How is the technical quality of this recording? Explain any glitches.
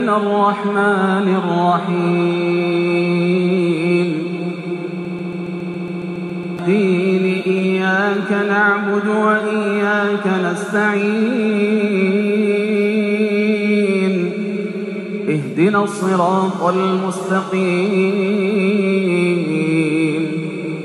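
The recording has one clear glitch, a broken-record loop between 5.05 and 6.59 s. A fragment about 0.14 s long repeats exactly, back to back, 11 times, producing a rapid, mechanical stutter at roughly seven repeats per second. The cause is likely a stall in the player, encoder or stream, which kept resending the last fragment it held. The audio that should have played during those 1.5 s is missing, so the sound jumps ahead when the loop ends.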